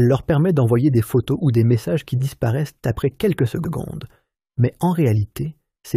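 At about 3.63 s there's a short stutter: the stretch running to 3.73 s plays through, then comes round a second time. That's repeated frames. A block of compressed data got written or sent twice, so the decoder simply replayed it. The repeated chunk is about 93 ms long, which fits a run of roughly four codec frames, and that one extra pass stretches the audio by the same 93 ms.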